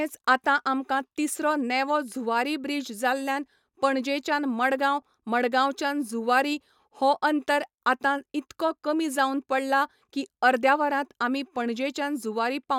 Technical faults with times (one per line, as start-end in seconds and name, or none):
none